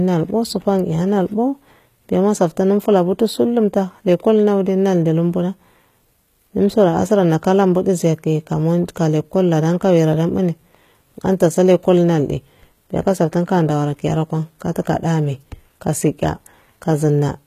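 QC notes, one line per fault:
Throughout, HE-AAC compression: gritty, lispy s sounds and nothing above 14.9 kHz, likely from treble rebuilt by band replication, which fits a stream near 20 kbps.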